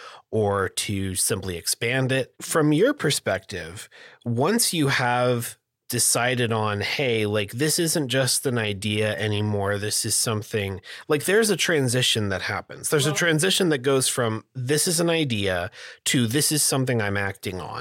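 No technical faults can be heard anywhere in this speech recording.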